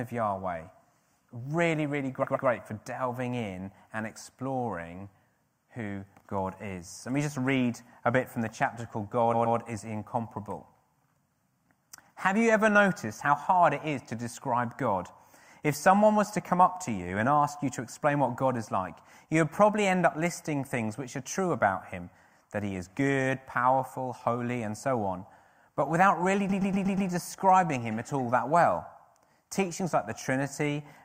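At 2.23 to 2.47 s, just before "for delving in and", the same 120 ms block plays three times: repeated frames, where a run of compressed frames reached the decoder more than once. It recurs at 9.33 to 9.57 s after "from the chapter called". At 26.49 to 27.09 s, between "on but without really" and "describing him at all", the block loops five extra times, adding 600 ms. Unlike a dropout, nothing is missing. Identical audio stutters and the sound gets longer.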